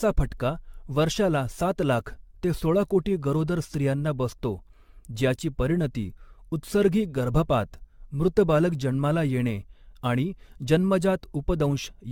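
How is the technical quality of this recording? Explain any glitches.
The quality is noticeably degraded throughout. Generation loss runs the whole way: swirly, hollow speech with smeared consonants and nothing above 17 kHz, likely from around ten AAC re-encodes, consistent with roughly 96 kbit/s, each pass adding fresh quantisation damage.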